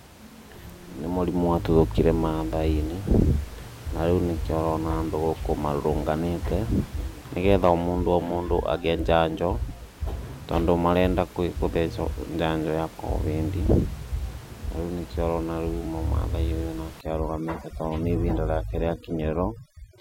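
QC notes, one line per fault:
17.01–20.01 s, overdone noise removal: the room noise, about 20 dB under the speech before this, drops and breaks up into twinkling specks as bands near the noise estimate are cut. A gate would mute all bands together.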